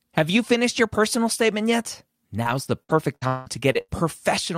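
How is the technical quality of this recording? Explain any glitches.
The recording has one clear fault: repeated packet loss with a robotic sound, from 2.43 s to 3.91 s, right after "your personal statement yet". Over that stretch there are seven gaps, the longest 180 ms, totalling about 440 ms of missing audio. The decoder hides each hole by extending the last received sound, which fills about 29% of the span. Because these patches come one after another, the speech turns choppy, with pieces absent.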